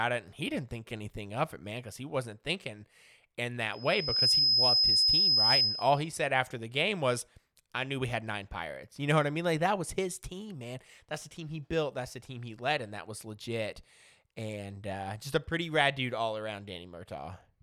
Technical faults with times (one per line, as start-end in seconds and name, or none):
3.73-6.11 loudspeaker feedback squeal